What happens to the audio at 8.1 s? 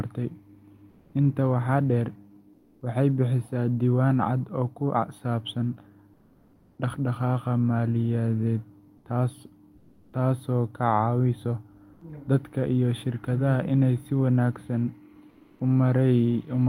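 Nothing goes wrong at 8.1 s; the speech there plays through intact, with no dropout, click, distortion or other fault.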